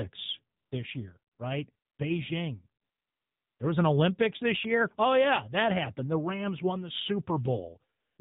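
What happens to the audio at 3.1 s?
From 2.82 to 3.60 s the audio drops into AMR comfort noise. For about 0.78 s no speech frames arrive, and the receiver fills the gap with synthetic noise built from a rough level-and-spectrum description. The real background is replaced by a smooth, steady hiss that switches in and out abruptly. On a spectrogram this shows as a flat, featureless band with hard vertical edges; on the waveform it is an even, low-level block.

The AMR narrowband mobile codec also colours this moment, as it does the whole clip. Nothing above 4 kHz survives, and the low-bit vocal-tract model gives the sound a buzzy, synthetic edge, fitting a rate around 7.4 kbps. On a spectrogram everything is sharply cut off at 4 kHz.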